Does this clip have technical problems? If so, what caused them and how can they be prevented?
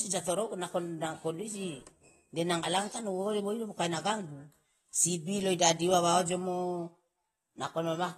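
Yes. Throughout the speech there is plainly audible damage consistent with AAC compression, likely from AAC-LC at a low rate that fits roughly 36 kbps. Nothing is present above 12.4 kHz, and the encoder's hearing model has discarded quieter spectral detail, leaving a dull, smeared tone with a fizzy, warbling texture on sibilants. A simple low-pass filter would cut the top cleanly without that grainy, shifting swirl. Prevent it by encoding speech at 64 kbps or higher, or keeping a lossless master.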